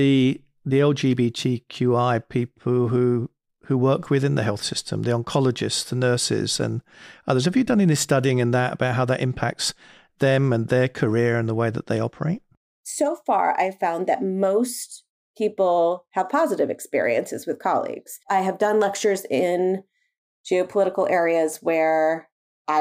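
Speech, with one quick glitch near the end: a case of chunks out of order at 21.53 to 21.55 s. A 10 ms chunk of audio landed one chunk late, so it plays after the slice that should have followed it. Nothing actually goes missing, but the swap leaves three hard joins packed into about 20 ms, so you get a tiny jumbled blip rather than a dropout.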